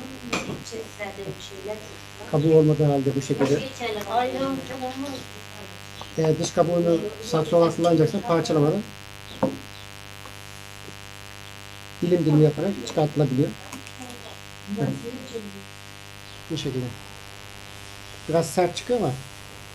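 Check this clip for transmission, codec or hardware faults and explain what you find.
A steady, raspy mains buzz runs through the whole clip, roughly 20 dB below the signal: sharp 50 Hz switching spikes, twice per cycle, spreading harmonics into the kilohertz range.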